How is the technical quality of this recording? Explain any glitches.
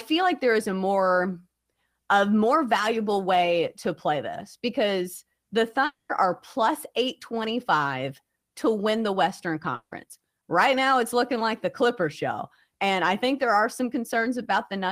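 The speech carries two brief gaps where the audio drops out. A long network dropout occurs at 5.85 to 6.11 s, between "play this because the" and "are plus", and again at 9.75 to 9.93 s. The likely cause is that no audio arrived for about 240 ms and 160 ms, so the receiver stretched the last sound into a fading buzz. The second gap ends in roughly 50 ms of silence before the speech resumes with that stretch lost.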